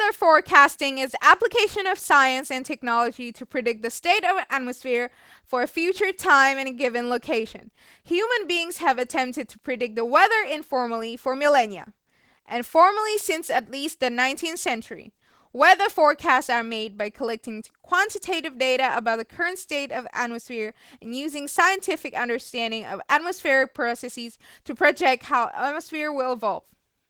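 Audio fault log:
Throughout, Opus voice compression: speech sounds hoarse and faintly robotic, consistent with about 16 kbps. Unlike a band-limited codec, the band stays open to about 20.2 kHz, so the open upper range suggests a CELT layer above 8 kHz over linear-prediction coding.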